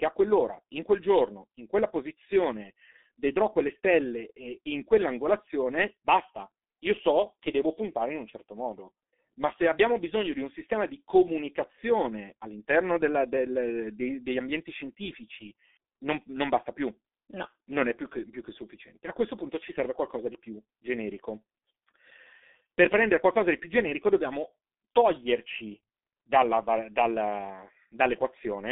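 Throughout, the speech is muffled and hoarse, empty above 3.7 kHz, with smeared consonants: heavy G.723.1 codec damage, consistent with a roughly 6 kbit/s stream.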